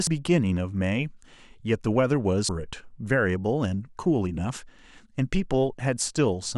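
At 0.07 s and 2.49 s, damaged data in the compressed stream makes the decoder misread frames and resynchronise, producing a brief chirp, squawk, click or short hole.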